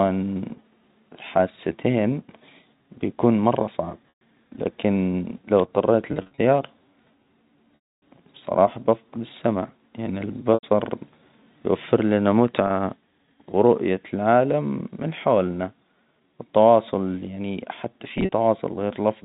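Packet loss with pitch repetition at 4.09–4.21 s, 6.12–6.38 s, 7.75–8.02 s, 10.54–10.63 s (after "السمع يعنى"), 12.67–12.70 s (after "يوفر لنا") and 18.18–18.32 s (after "التواصل يعني حتى"): the receiver repeats the last pitch period, so brief gaps buzz and the 270 ms loss fades to silence.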